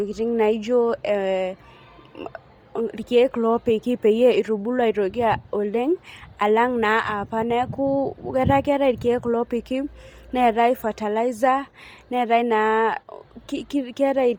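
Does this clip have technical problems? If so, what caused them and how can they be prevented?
Yes. Heavy compression damage runs through the whole speech clip. The upper spectrum sounds breathy and grainy, with a hissy texture in place of clean detail. Content reaches up to about 20.3 kHz. The likely cause is Bluetooth LC3 compression. LC3 codes audio in 10 ms transform frames. At a low rate, which here points to around 32 kbps, it drops much upper detail and fills the gaps with noise. To prevent it, record over a wired path or raise the Bluetooth bitrate.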